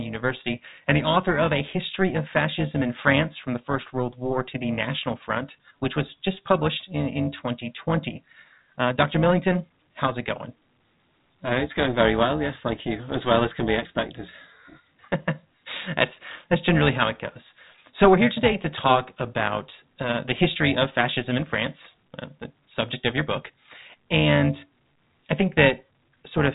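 From start to finish the speech carries overlap-add ripple: the frames were rejoined with overlaps that don't sum to a steady gain, so the level dips by about 11 dB around 400 times a second, giving a metallic buzz with extra tones around the voice over the telephone-band sound, which stops near 3.8 kHz.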